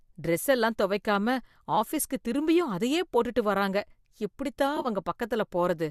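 Just after "எப்படி தான்", from 4.77 to 4.87 s, AAC frame loss with concealment occurs. About 50 ms of frames went missing in bursts, the longest roughly 30 ms. The decoder rebuilt each gap from the last good spectrum, leaving a brief smeared, phasey, noisy blur.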